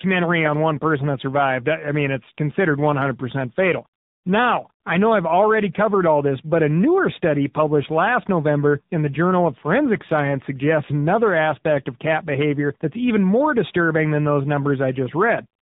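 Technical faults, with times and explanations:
Throughout, tandem speech coding: the speech went through two speech coders in a row, a CVSD stage and then AMR-NB, which fits a rate near 7.4 kbit/s. Each coder's errors stack, so the speech is rougher and more warbly than one codec would make it, and nothing reaches above 3.8 kHz.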